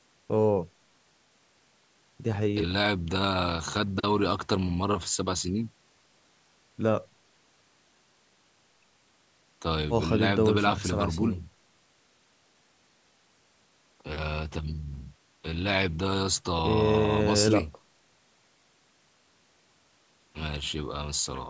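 No faults are present; the speech carries the usual call microphone processing, with the lowest bass trimmed and no content above 8 kHz.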